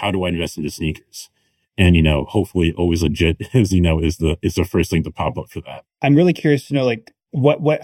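From start to finish the speech sounds hollow and phasey, as though heard down a tube, with a quality that never changes. This is channel delay (comb filtering). One channel runs late by well under a millisecond, and when the two are summed to mono, content common to both cancels at evenly spaced frequencies. The first notch falls around 1.5 kHz, with further fixed notches repeating higher up the spectrum.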